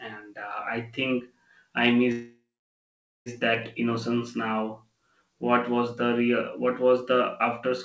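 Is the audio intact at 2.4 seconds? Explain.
No. A call audio freeze spans 2.12 to 3.29 s, just after "think I." The last sound is stretched into a fading buzz or hiss, then about 0.83 s of silence. Packets were likely held up and the jitter buffer ran dry. Nothing is lost. "that innocence now" resumes about 1.14 s late.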